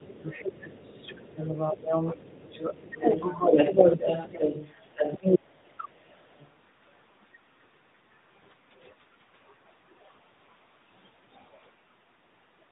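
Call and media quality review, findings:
Tandem speech coding, throughout: rough, muffled, warbly speech with nothing above 3.8 kHz. Two speech coders in a row, each re-encoding the previous one's degraded output. The sound fits an ADPCM link followed by a narrowband AMR leg near 10 kbit/s.

Speech suppressed in double talk, 0.0–3.1 s, 3.44–4.45 s, 5.38–5.84 s: near-end speech dips or drops out in pieces. Dips are about 20 dB in the first two spans, with most of the first 3 s affected and roughly 0.4 s of the second. The third span drops about 35 dB. Likely cause is the echo canceller, which misreads overlapping talk as echo and attenuates both.

Other side's voice leaking through, 0.13–1.49 s, 2.92–5.39 s, 5.84–6.53 s: far-end voice audible behind the talker. It is faint in the first and last spans, about 25 and 30 dB down. At 2.92–5.39 s it is about 5 dB louder than the talker. Likely cause is residual loudspeaker echo that the canceller failed to remove.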